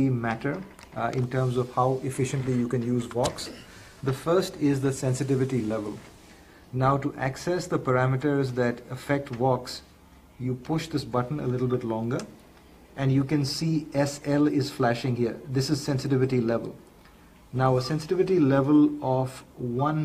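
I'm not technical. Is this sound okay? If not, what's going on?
No. Clock slip clicks run from 0.14 s to 20.02 s: faint ticks roughly every 0.15 s, likely from two devices running on slightly mismatched clocks.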